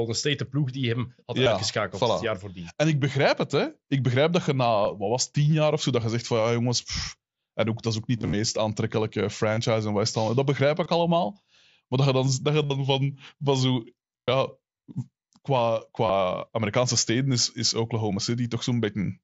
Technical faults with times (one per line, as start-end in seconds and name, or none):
1.44-1.46 concealed Bluetooth headset packet loss
4.83 concealed Bluetooth headset packet loss
8.18-8.33 concealed Bluetooth headset packet loss
9.55 concealed Bluetooth headset packet loss
10.83-10.86 concealed Bluetooth headset packet loss
12.63-12.70 concealed Bluetooth headset packet loss
14.23-14.28 concealed Bluetooth headset packet loss
16.07-16.09 concealed Bluetooth headset packet loss